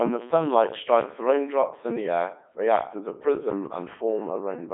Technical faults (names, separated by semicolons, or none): Codec 2 vocoder